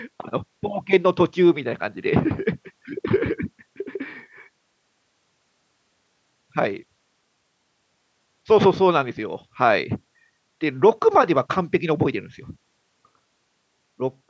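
No technical faults can be heard in this speech, and the call microphone processing that trims the lowest bass and caps the top at 8 kHz is working as intended.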